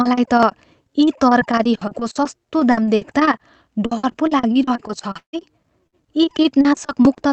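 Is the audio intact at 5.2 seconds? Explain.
No. From 5.17 to 5.36 s the last sound smears into a fading buzz, then goes quiet. This is likely a long network dropout, and 120 ms of audio is lost.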